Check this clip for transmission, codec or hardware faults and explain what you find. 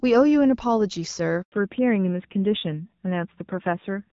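Two faults here, and they're linked: a dropout followed by a drop in bandwidth.

At 1.42 s there's a handover gap. The call switches networks, no speech frames arrive for about 100 ms, and the sound just cuts to silence until 1.52 s.

From 1.52 s to the end, there's a fallback to narrowband. The fairly clean HD Voice before the gap, consistent with AMR-WB at around 12.65 kbit/s, gives way to what sounds like AMR-NB at around 7.4 kbit/s. Nothing survives above 4 kHz, so it turns dull and rough.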